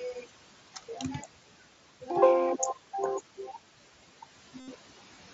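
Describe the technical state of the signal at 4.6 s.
At 4.60 s a run of concealed Bluetooth headset packet loss begins and lasts until 4.68 s, about 75 ms. The link between headset and phone dropped several packets in a row, and the receiver filled the gap by repeating the best-matching recent stretch of waveform. Over this length the repetition becomes a buzzy, steady tone held at full level, with a slight warble where real audio resumes. A dropout or mute would go silent instead, and a codec glitch would not sustain a periodic buzz.

Noise suppressor artifacts are also present at this moment, as they are throughout. The suppressor pulls down bands it judges to be steady noise by about 11 dB, so the background dips and swells with the speech. Unlike the packet-loss buzz, this is a continuous, level-dependent thinning of the noise floor rather than a discrete event with a clear start and end.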